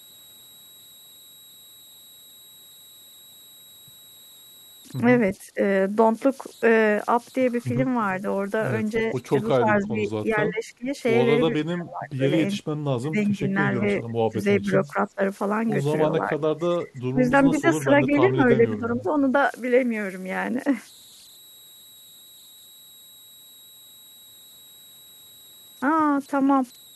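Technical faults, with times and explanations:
Throughout: converter idle tones. An undithered delta-sigma converter cycles through fixed bit patterns at low levels, leaving a faint whistle near 4 kHz, about 28 dB below the speech.
5.41–5.6 s, 9.59–10.91 s, 11.48–12.56 s, 13.02–15.21 s, 16.08–19.16 s: speech suppressed in double talk. The echo canceller likely confused overlapping talk with echo and turned the speech down, dips reaching roughly 10 to 25 dB, so it fades or breaks into pieces.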